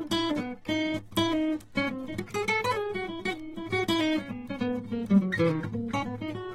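From start to finish the music sounds dull and smeared, with a warbly, fizzy edge on sustained tones and nothing above 16.6 kHz. That's likely AAC compression, starving the spectrum of bits in a way that fits roughly 24 kbps AAC-LC.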